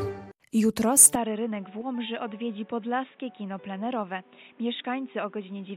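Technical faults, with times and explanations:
1.15 s to the end, input switched to a poorer device: the sound abruptly turns dull and boxy, roughly 10 dB quieter, with faint new background noise and nothing above 3.8 kHz. This is likely a switch to a narrower-band microphone.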